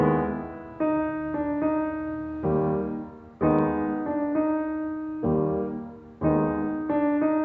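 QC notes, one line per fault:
The music carries the band-limited sound of a call chain, with the microphone processing and an Opus-coded WebRTC path leaving nothing above 8 kHz, as expected for that route and consistent with a codec running at around 64 kbps.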